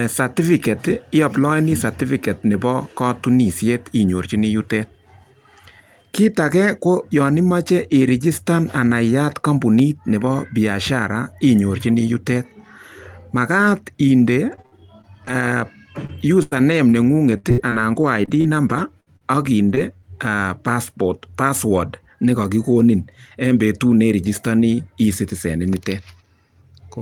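At 9.79 to 9.82 s, a loud pop: a sudden voltage pulse, likely from a switch or static discharge, lands on the signal as one sharp crack about 5 dB above the speech.

From 14.55 to 20.04 s, repeated packet loss: 17 holes, the longest 87 ms, are patched by extending the last sound, about half a second in total, leaving choppy, robotic speech with pieces missing.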